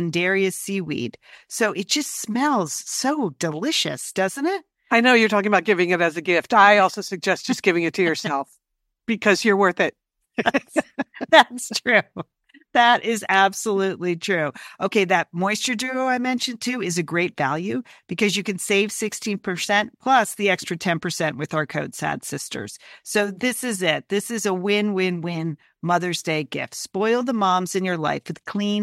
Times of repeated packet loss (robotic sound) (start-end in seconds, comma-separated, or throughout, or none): none